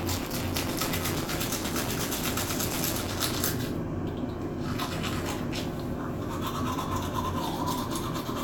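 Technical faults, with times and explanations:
0.00–3.35 s, buffer tearing: a robotic 172 Hz buzz, as writer and reader cross each period, splicing in about a tenth of 20 ms-old audio; fits a 256-sample buffer.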